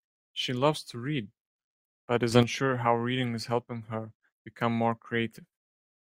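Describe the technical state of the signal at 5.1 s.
At 5.1 s the speech signal is intact, with no audible technical fault.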